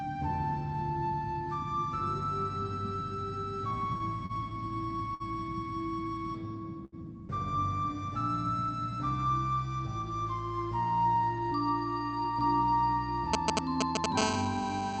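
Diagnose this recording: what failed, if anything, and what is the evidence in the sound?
Four brief hitches where the sound hangs and smears: 3.97 to 4.02 s, 4.26 to 4.31 s, 5.14 to 5.22 s and 6.85 to 7.00 s, held for 27, 33, 57 and 75 ms. These are short stalls from a late packet at the network and jitter-buffer stage. The buffer ran dry, the last sound was stretched, and playback resumed where it stopped, so nothing is lost. The audio passes through an Opus call path with an 8 kHz top end.

From 13.34 to 14.06 s comes a galloping dit-dit-dit of short buzzes, a little louder than the sound itself. These are GSM signalling bursts: a nearby 2G phone's radio pulses, repeating at about 217 Hz, are rectified in the analogue wiring and audio circuit.

From 14.18 s to the end, a hard, raspy, harmonic-rich 217 Hz buzz runs steadily, about 5 dB below the sound. This is GSM phone buzz. A nearby 2G phone is now transmitting in a call, sending bursts 217 times a second, and the analogue circuitry demodulates those bursts into audio.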